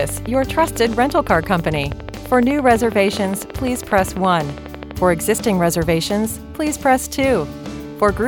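A steady ticking runs over the audio from the very start, 0.01 s, until 4.92 s, about a dozen sharp, near-identical clicks each second, evenly spaced and audible through quiet stretches as well as busier ones. This is a train of clicks, around seventy in all, peaking roughly 10 dB above the underlying sound. The regular 12-per-second pulse points to an external injection, likely electrical interference from nearby equipment or a faulty connection or power supply, rather than anything in the source itself.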